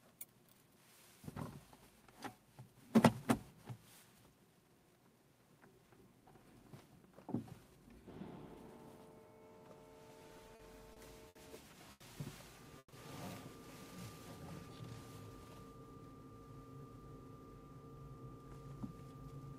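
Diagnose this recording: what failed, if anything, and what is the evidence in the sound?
The network stage failed, starting with repeated stalls (stutter) between 10.19 and 11.37 s. The sound catches seven times in that span, with about 180 ms of held or repeated material in total and the longest catch around 70 ms, roughly 15% of the span. Packets were reaching the receiver late or slower than real time, so its jitter buffer kept draining and the receiver extended the last sound each time. Nothing is lost; the audio simply drags.

A single short stall from a late packet follows at 11.91 to 12.02 s. One sound is held for about 90 ms, and then the audio resumes exactly where it paused. The packet arrived roughly 90 ms behind schedule, the jitter buffer ran dry, and the receiver stretched what it had until the packet turned up. No audio is skipped.

From 12.78 to 12.94 s there is a call audio freeze. 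About 140 ms of the last sound is continued and decays, ending in roughly 50 ms of silence before the audio picks up from the point where it stopped. The likely cause is packets held up in transit long enough to empty the jitter buffer, with the receiver's concealment fading out over the wait. Nothing is missing; a gap has been inserted.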